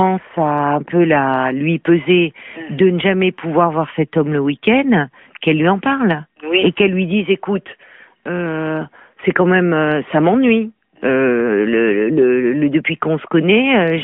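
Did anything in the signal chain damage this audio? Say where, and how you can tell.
No, nothing in the signal chain damaged this audio.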